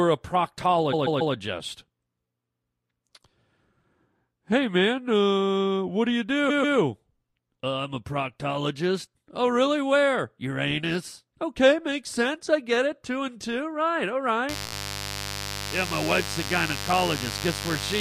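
Speech, with two faults. Short runs of compressed frames were played more than once, giving repeated frames heard as stutters. A 139 ms block repeats three extra times at 0.92 to 1.34 s and twice more at 6.49 to 6.77 s, a 17 ms block repeats four extra times at 14.66 to 14.73 s, and a 6 ms snippet doubles at 16.93 s, together lengthening the audio by about 0.77 s. From 14.49 s to the end, switching spikes from a dimmer, rectifier or missing shield add mains buzz, a steady raspy 50 Hz buzz with harmonics, around 10 dB below the speech.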